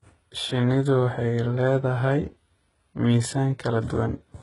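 From start to finish the speech carries heavy HE-AAC compression damage, likely from a very low bitrate around 12 kbps. Nothing survives above 11.1 kHz, yet the treble still reaches up to there. Unlike a plain low-pass, that upper band is rebuilt from copied lower bands, so sibilants sound gritty and metallic rather than dull.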